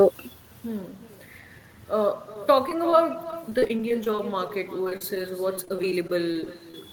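From the start, echo with no canceller is present: the far-end loudspeaker feeds back into its microphone, so the speech returns roughly 0.4 s later as a thinner copy, about 14 dB down. From 2.34 s to 6.74 s, repeated packet loss (robotic sound) sets in. Many short gaps, none longer than 36 ms, are patched by extending the previous sound, covering about 470 ms in all and leaving the speech choppy with pieces missing.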